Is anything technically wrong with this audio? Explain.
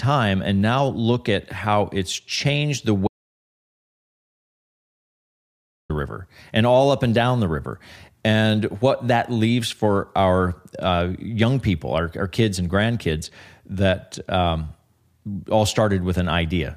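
Yes. An audio dropout to silence runs from 3.08 to 5.90 s. The input was likely lost for that stretch while recording continued, writing silence. The speech cuts off abruptly, about 2.8 s is dead silence with no room tone, then the speech resumes mid-flow.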